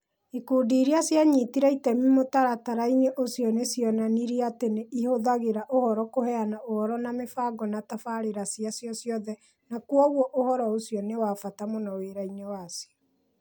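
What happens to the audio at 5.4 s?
Nothing goes wrong at 5.4 s; the speech plays through that moment intact, with no dropout, click, distortion or other fault.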